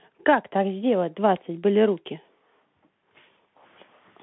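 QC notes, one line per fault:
Throughout: Bluetooth CVSD headset codec. The speech sits in a narrow telephone-like band of 150 Hz to 3.5 kHz, with nothing above 3.8 kHz, which fits a 64 kbps CVSD headset link. CVSD sends one bit per sample saying only up or down, with an adapting step size. Loud high-frequency sound outruns that step and distorts, s sounds turn scratchy, and a granular hiss lies under the speech. The damage is plainly audible.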